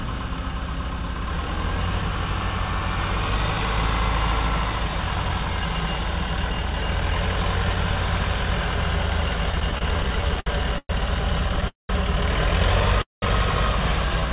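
From 9.52 to 10.91 s there are repeated stalls, a stutter. The sound keeps catching and dragging. Thirteen short gaps fall across this stretch. Each is bridged by stretching out the sound just before it. The longest lasts 110 ms. Together they fill 290 ms, about a fifth of the span. Nothing is lost. Packets were arriving late, so the jitter buffer kept running dry.

At 11.68 s comes a call audio freeze lasting 210 ms. The last sound hangs on briefly, then fades. About 150 ms of silence follows. The audio then resumes where it stopped, now 210 ms later. The likely cause is packets held up in transit, emptying the jitter buffer. A second freeze starts at 13.02 s and runs for 205 ms. This one includes about 170 ms of silence. It sounds the same and adds the same kind of delay.

From 14.09 s to the end there is a jitter buffer slow-down. The pitch stays the same, but the sound plays at about 85% speed. 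Sounds are drawn out. The receiver repeated single pitch periods to rebuild its reserve. This adds 47 ms.

Throughout, nothing is heard above 4 kHz. That fits a narrowband call codec.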